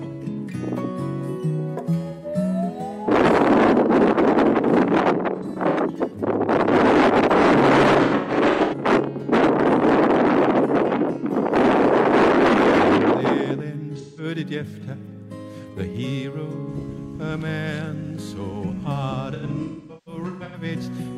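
AAC frame loss with concealment strikes five times as the decoder loses chunks of the stream and fills each gap by reusing the last good spectrum. Brief gaps at 2.10–2.26 s and 14.00–14.24 s sound like smeared, noisy patches. Scattered losses at 5.34–5.79 s and 8.03–8.74 s turn phasey, with the longest runs around 100 and 150 ms. At 19.34–20.64 s, runs up to about 300 ms decay toward silence before fading back.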